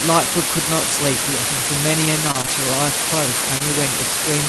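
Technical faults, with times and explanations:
Throughout: low bit depth with dither. The signal is held to 3 bits, with dither added before rounding, so the coarse rounding error becomes steady white noise. The result is a constant, even hiss sitting only slightly below the speech level, with no harsh distortion.
2.31–2.36 s: short stall from a late packet. A packet arrived late and the jitter buffer ran dry, so the receiver held the last sound for about 22 ms until it came in, then resumed where it left off. Nothing is lost, but the sound briefly drags.
2.34–2.40 s: lost packet rebuilt from error correction. Two packets went missing, but each following packet carried a low-bitrate copy, which the Opus decoder played instead. There is no gap. The 40 ms of rebuilt audio sounds rougher and noisier than the surrounding speech.
2.42–2.50 s and 3.58–3.62 s: short concealed packet loss. Twenty-millisecond pieces never reached the decoder in time: two back to back in the first stretch and one in the second. 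The receiver extended the preceding sound to bridge each hole and blended back into the real audio. Each bridge is heard as a short smear or wobble.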